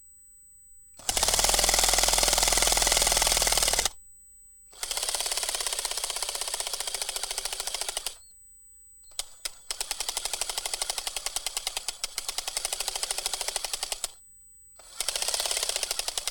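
USB whine: current drawn in 125-microsecond USB microframes leaks through power or ground, laying a fixed 8 kHz whine roughly 25 dB below the sound throughout.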